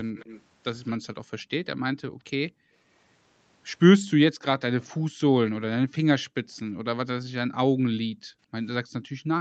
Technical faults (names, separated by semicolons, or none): echo leak; background gated by the echo canceller